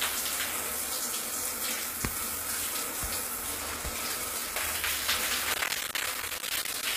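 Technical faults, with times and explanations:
throughout: HE-AAC compression. The treble sounds bright but synthetic, with gritty, metallic hiss on the upper detail that does not line up with the lower spectrum. This is likely HE-AAC v2 coding at a low bitrate around 24 kbps, rebuilding the treble by copying lower bands upward.
5.54–6.83 s: processor overload crackle. A dense run of tiny dropouts tears through the sound as rough crackle for over a second. Short blocks of roughly 10 ms each fall to silence, dozens in a row, which fits the processor repeatedly missing its buffer deadlines until the load eases.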